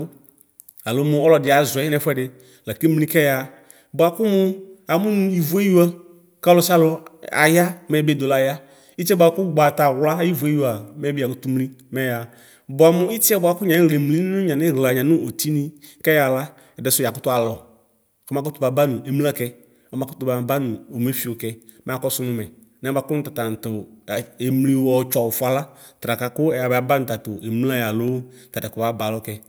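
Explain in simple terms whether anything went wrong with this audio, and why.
Two devices likely ran on slightly mismatched clocks, causing clock drift buffer slips: clicks in the speech every 2.04 s from 1.47 to 28.08 s.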